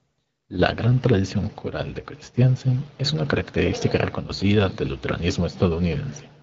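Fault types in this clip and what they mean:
Nothing here counts as a fault: the speech comes over the AMR wideband (HD Voice) link at 12.65 kbit/s, the rate where that codec stays clear.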